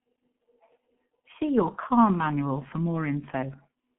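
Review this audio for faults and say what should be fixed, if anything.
The whole clip carries G.723.1 codec damage: speech is confined to roughly 150 Hz to 3.4 kHz, and slow 30 ms frame updates at a rate that fits about 6 kbit/s leave it hoarse, with smeared consonants. Simple band-limiting would sound muffled but clean, without the hoarseness. Prevent it by using a wideband, higher-bitrate codec on this link.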